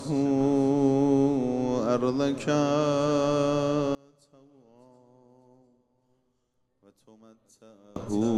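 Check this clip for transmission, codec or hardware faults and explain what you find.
One fault is audible: a sudden collapse in level from 3.95 s to 7.96 s, where the sound drops by about 29 dB and turns faint. The likely cause is one channel inverted: with one stereo side in reversed polarity, everything common to both channels cancels on a mono sum, leaving only their small difference. On a waveform the amplitude shrinks abruptly across that span; a spectrogram shows it darkening.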